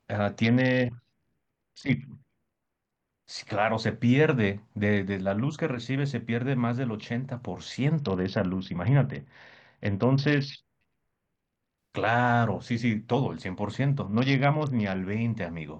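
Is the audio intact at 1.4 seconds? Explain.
No. From 0.44 to 3.25 s a Bluetooth SBC bit pool drop starves the upper sub-bands, fitting a fall from 31 to 7, so the speech turns dull and gritty.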